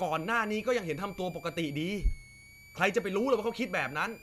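A switching supply whistle runs from start to finish beneath the speech. A power converter is cycling at an audible rate, leaving a thin tone that sits between about 2.2 and 2.4 kHz, roughly 25 dB below the speech.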